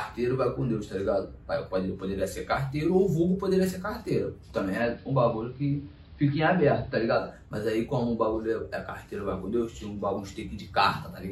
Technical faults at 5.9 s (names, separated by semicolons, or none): digital radio blending to analogue